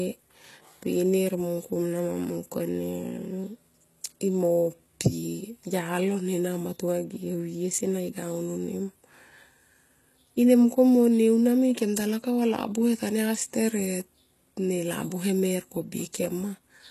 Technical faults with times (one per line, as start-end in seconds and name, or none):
0.00-16.91 HE-AAC compression